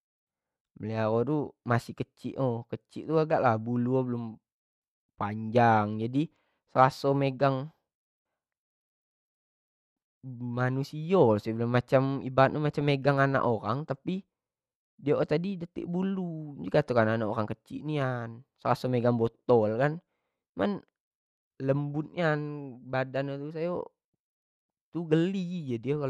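MP2 compression runs through the whole speech clip: the top end sounds dull and the remaining detail has a gurgling, grainy edge, likely from MPEG Layer II coding at around 80 kbps, where upper sub-bands starved of bits drop out and the rest are coarsely quantised.

DAB burbling strikes at 2.35 s, just after "masih kecik", and again at 12.81 s: brief blips of noise where corrupted bits slipped past error correction into the MP2 data, putting wrong samples into single sub-bands across what sounds like a few frames.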